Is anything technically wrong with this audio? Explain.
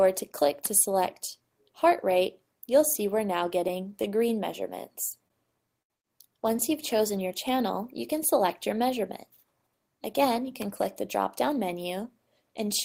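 Yes, there are two packet-delivery faults in the audio.

From 3.59 to 4.07 s there are scattered short gaps. A few packets, around three, arrived late or not at all, and the receiver covered each hole by extending the preceding sound. Every patch is tiny, the longest roughly 10 ms, about 30 ms concealed in all, or around 5% of the stretch. The result is clear audio with brief ticks or slight smears. About 20 ms of extra time is added and nothing is dropped.

From 5.28 to 6.58 s there are repeated stalls, heard as stutter. Packets came in more slowly than playback consumed them, so the jitter buffer emptied three times. Each time the receiver held the last sound going until data resumed, filling 109 ms altogether, 8% of the span. The longest stall is 78 ms. No audio is lost, but the flow hesitates and stumbles.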